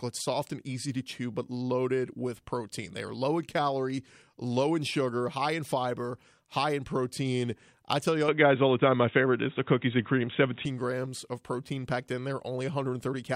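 From 8.28 to 10.65 s the speech turns dull and boxy, with nothing above 3.8 kHz, a level shift of around 5 dB and faint new noise: likely an input switched to a poorer device.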